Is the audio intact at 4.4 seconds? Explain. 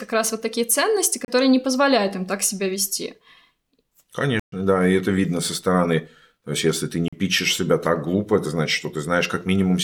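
No. From 4.40 to 4.52 s the speech drops into a block of digital silence, 128 ms long, which fits the output buffer not being filled in time. Unlike a faded dropout, it cuts to silence and back abruptly, heard as a short hole in the speech.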